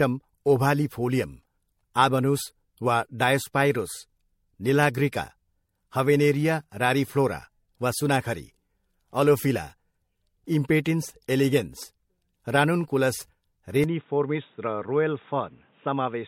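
Across the whole clip the speech sounds swirly, smeared and hollow, with blurred consonant attacks and nothing above 16.5 kHz. This is generation loss, likely from repeated lossy encoding, around four passes, consistent with 64 kbit/s MP3, each adding fresh quantisation noise and spectral holes.

At 13.84 s the speech abruptly turns dull and boxy, with nothing above 3.8 kHz, a level drop of about 5 dB and a faint new noise floor well beneath it. There is no gap at the change. The likely cause is the input switching to a poorer device.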